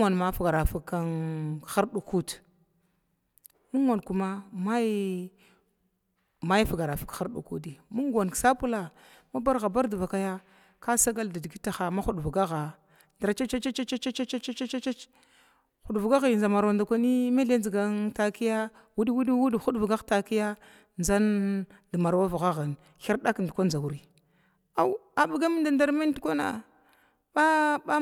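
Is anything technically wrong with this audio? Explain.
No, nothing technically wrong turns up anywhere in this one; it's all in good shape.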